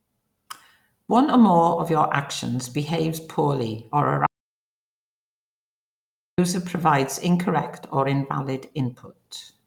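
At 4.26 s the speech cuts to total silence until 6.38 s, an audio dropout to silence lasting about 2.1 s, likely from lost input while recording continued writing zeros.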